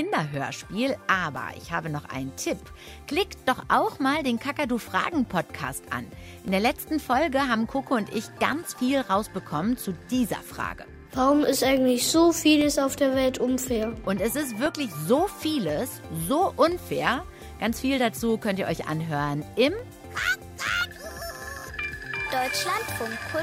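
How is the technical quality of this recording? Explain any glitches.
The recording has one recurring technical fault: periodic USB or driver dropouts from 0.34 s to 22.86 s. Something on the system is stalling the USB bus or audio driver once every 1.024 s, and each stall loses roughly a millisecond of audio, which gets filled with silence. Around twenty of these tiny gaps occur across that span. Each abrupt cut to silence and back produces a short, evenly timed tick or pop, audible only where there is signal underneath it.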